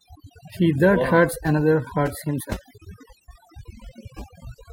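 Throughout the speech, overdone noise removal has pushed bands near the estimated noise floor down hard, leaving near-silent gaps with twinkling specks and quiet parts of the voice pulled down with them.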